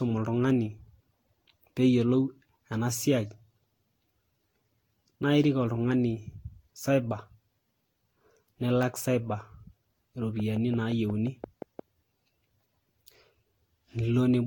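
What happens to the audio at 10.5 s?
A train of clicks runs from 10.40 to 11.80 s, likely from interference or a faulty connection injecting a pulse at a steady 5.7 per second. About ten similar clicks tick over the speech, peaking a few dB above it and audible in pauses too.

Generation loss also affects this moment. The audio was likely decoded and re-encoded around seven times with Vorbis at roughly 63 to 67 kbit/s, each pass requantising on a shifted frame grid. The sound is swirly, hollow and smeared, with blurred attacks, and there is nothing above 19.2 kHz.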